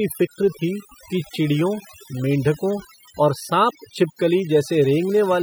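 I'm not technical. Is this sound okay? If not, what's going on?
No. Overdone noise removal runs through the whole speech clip: the cleanup was set too strong, so gaps sound near-silent with twinkling, warbling specks and quiet parts of the voice get cut away along with the noise.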